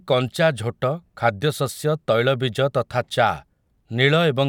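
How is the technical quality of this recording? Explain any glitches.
No technical glitches can be heard in the recording, and the speech signal stays continuous and steady throughout, with nothing interrupting or disturbing it.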